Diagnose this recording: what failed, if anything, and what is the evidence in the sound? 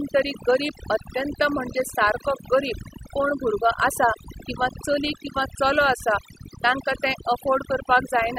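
Overdone noise removal runs through the whole speech clip. It is a call-processing fault: a noise reduction stage set far too aggressively. Between phrases the background drops, broken by twinkling specks where isolated frequency bands flicker on and off. The suppressor attenuates any band it judges close to its noise estimate, and that pulls down the quieter parts of the speech along with the noise.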